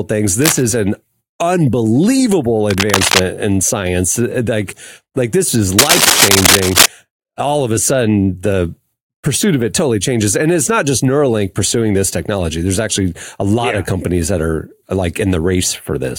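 Bursts of scratchy, rustling noise as loud as the speech sit over it from 0.42 to 0.63 s, before "an unbelievable", and from 2.70 to 3.20 s, before "in science", then somewhat louder from 5.79 to 6.86 s after "like this is". This is cable scratch noise, likely from a worn cable or connector moving.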